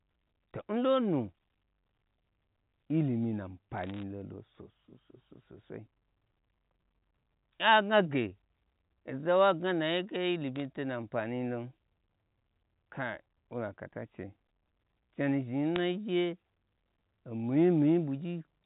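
Bit errors on a digital phone line break through in three bursts: 3.78 to 4.03 s, 10.56 to 10.62 s, and 15.76 to 15.80 s. Each flipped bit corrupts a single sample of the G.711 A-law stream. Where a sign or high-order bit is hit, that sample jumps far off the waveform and gives a sharp tick, so each burst is heard as brief crackle laid over unchanged speech. The error rate is a fraction of a percent, highest in the first and last bursts.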